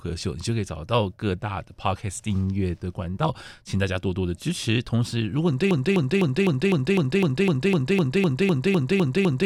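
From 5.71 s to the end, one 0.25-second fragment of speech repeats 15 times back to back, a broken-record loop, likely from a stalled player or stream resending its last buffer.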